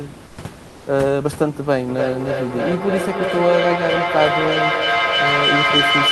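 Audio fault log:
0.27–0.37 s and 0.69–0.85 s, comfort noise in place of the background: the room tone goes flat and featureless, about 4 dB and 1 dB quieter, likely discontinuous transmission filling pauses.
1.88 s to the end, feedback echo between two devices: speech keeps coming back about every third of a second, building up to about 2 dB above the talker instead of fading.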